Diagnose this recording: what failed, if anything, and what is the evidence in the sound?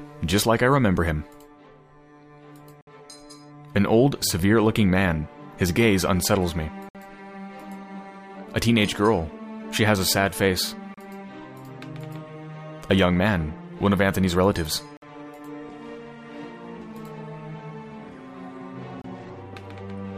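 Gaps between stream segments occur at 2.81, 6.89, 10.94, 14.97 and 19.02 s, at the playback stage. Each is a hard-edged dropout to silence lasting about 60, 59, 33, 53 and 28 ms respectively. The steady spacing of roughly 4 s points to segment boundaries. The timestamps of consecutive segments leave a small hole, and the player pads it with silence, so the sound stops abruptly and resumes with nothing missing.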